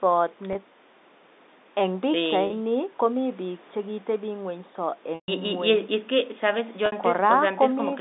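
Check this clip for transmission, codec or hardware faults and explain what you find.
There are four dropouts covered by packet loss with pitch repetition, at 0.53 s (20 ms), 2.47 s (30 ms), 5.15 s (130 ms) and 6.86 s (60 ms). The sizes fit 10 ms packets. Each time, the receiver looped the last pitch period to fill the hole. The two short ones just sound like a briefly held, buzzy bit of speech. The 130 ms gap runs past the roughly 50 ms fade, so it sinks into silence before speech cross-fades back in. All of this sits inside the narrow telephone band of the G.711 line.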